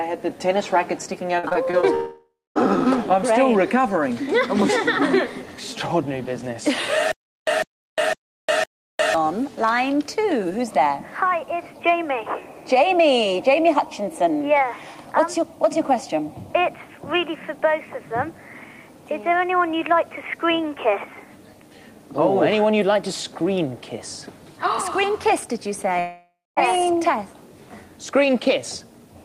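From 1.39 to 1.84 s there is repeated packet loss, giving a robotic sound. Five short holes appear, the longest 34 ms. Each is patched by stretching the previous sound, about a quarter of the span in all. The result is choppy and robotic.

At 1.94 s a long network dropout likely begins, running to 2.57 s. About 0.6 s of audio never arrives. A fading buzz or hiss carries the last sound forward. Then roughly 0.24 s of silence follows before the audio resumes, with the missing part gone.

From 7.12 to 9.14 s there is a stutter with silent gaps. The same 151 ms burst repeats four times, every 507 ms, with about 355 ms of digital silence between repeats. A stalled player or stream, retrying its last fragment, is the likely cause. The intended audio is lost.

From 25.99 to 26.58 s a second long network dropout likely occurs. About 0.58 s is missing. It is concealed by a fading tail and then roughly 0.23 s of silence.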